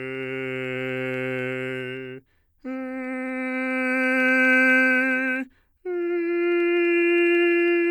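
Music with clock slip clicks from 0.15 to 7.85 s: two unsynchronised clocks likely slip a sample roughly every 70 ms, producing a faint, steady ticking rattle.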